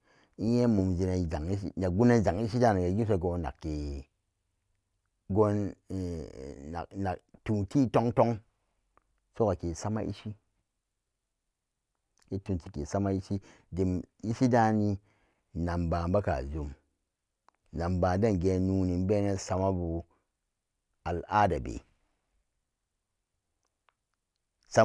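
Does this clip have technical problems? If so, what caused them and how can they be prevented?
No, this speech recording has no technical problems. Nothing in it needs fixing or preventing.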